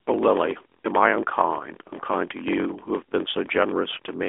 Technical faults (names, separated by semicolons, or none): block size mismatch (padded); AMR narrowband mobile codec